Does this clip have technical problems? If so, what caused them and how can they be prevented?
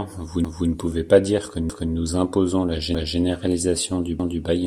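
Yes. The speech has overlapping chunks. A 250 ms stretch plays twice at 0.45–0.70 s, 1.70–1.95 s, 2.95–3.20 s and 4.20–4.45 s, producing a regular stutter every 1.25 s. The audio appears to have been processed in 1.0 s chunks, each starting 250 ms before the previous one ended. At every join, that overlap is played out twice. To prevent this, advance each chunk by its full length, or crossfade and discard the overlapping region instead of concatenating it.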